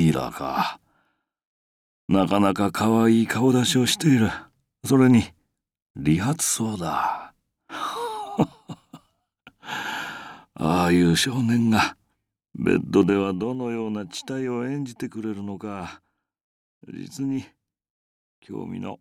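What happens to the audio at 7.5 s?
Nothing goes wrong at 7.5 s; the audio plays through that moment intact, with no dropout, click or distortion.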